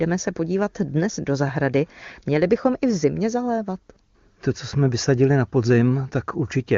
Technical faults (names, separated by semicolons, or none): none